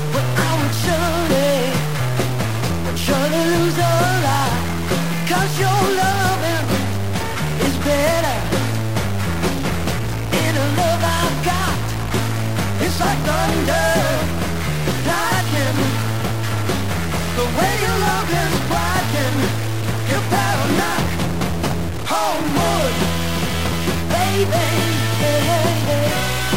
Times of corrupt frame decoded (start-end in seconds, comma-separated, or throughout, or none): none